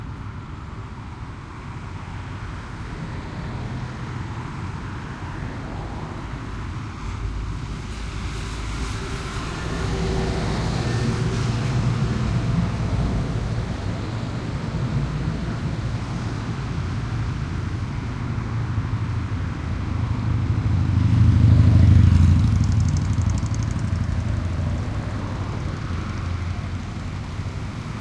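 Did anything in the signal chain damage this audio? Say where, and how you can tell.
No, nothing in the signal chain audibly damaged this everyday-sound recording: there is no sign that any stage along the path altered the signal.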